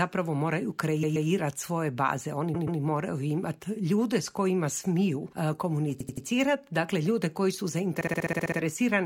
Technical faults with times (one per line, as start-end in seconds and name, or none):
1.02-1.28 repeated frames
2.54-2.79 repeated frames
5.99-6.25 repeated frames
8.00-8.57 repeated frames